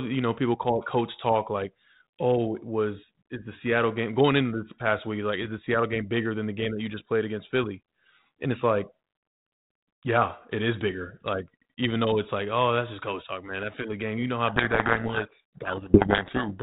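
At 14.48 s, right after "game you know how", a codec payload misread begins and runs to the end of the clip. The G.726 stream at 32 kbit/s carries the audio with light codec damage up to that point. Then the decoder starts reading each code word with its bits in the wrong order, so every ADPCM step is misinterpreted and the adaptive prediction drifts. The speech is buried under harsh, grinding distortion from there on.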